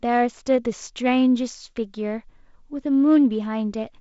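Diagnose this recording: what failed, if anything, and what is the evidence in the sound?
Nothing stood out on listening: the speech carries the band-limited, slightly hissy character of G.722 wideband telephone coding, with nothing audible above roughly 7.7 kHz, and no stage of the chain shows any failure.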